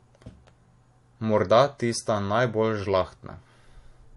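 Speech, with transcoding between lossy codecs throughout. The spectrogram shows a hard ceiling at 11.3 kHz and layered swirly, smeared artefacts, likely from a low-rate MP3 re-encoded to AAC.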